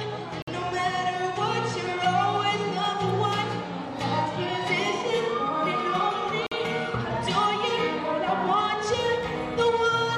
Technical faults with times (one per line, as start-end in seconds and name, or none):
0.42-0.48 gap between stream segments
6.47-6.52 gap between stream segments